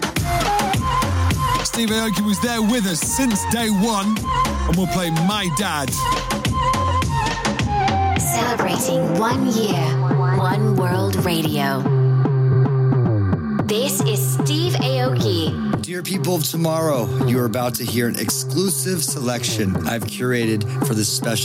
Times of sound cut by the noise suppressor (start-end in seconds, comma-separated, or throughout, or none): none